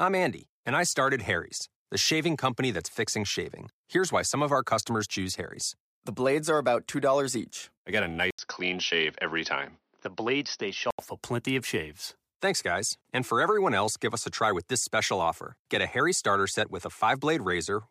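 An input switched to a poorer device is the likely cause of the change from 8.3 to 11.0 s in this speech. An 80 ms gap of silence opens at 8.3 s, and the sound that follows is dull and boxy, with nothing above 6.1 kHz, as a narrower-band microphone path would give. A faint new noise floor sits well below the signal, with no noticeable change in level. The dull sound begins just before "for plenty of shaves", and full brightness returns at 11.0 s.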